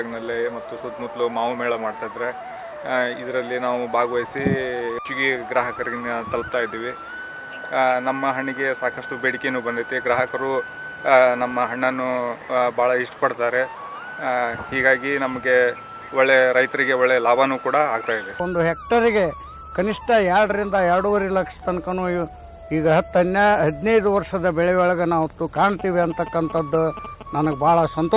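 No technical faults are audible.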